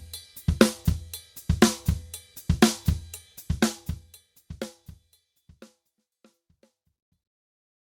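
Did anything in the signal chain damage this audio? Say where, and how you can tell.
No, nothing in the signal chain damaged this audio; the level eases down in a smooth fade-out from around three and a half seconds, the way an editor would shape an ending.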